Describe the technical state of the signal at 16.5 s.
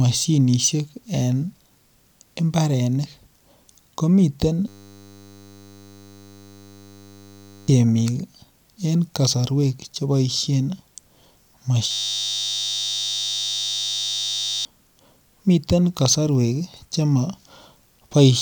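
At 16.5 s the speech signal is intact, with no audible technical fault.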